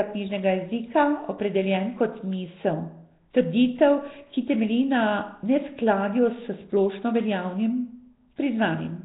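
Throughout, the speech carries a rough hissy halo, heavy underwater smearing and nothing above 3.9 kHz. This is likely Nellymoser compression, since its noise-filled gaps hiss where simple band-limiting would just dull the sound.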